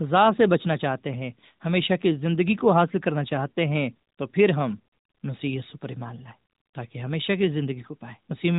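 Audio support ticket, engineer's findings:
Findings: no fault found in the speech audio; the AMR-NB narrowband path at 12.2 kbps is working normally.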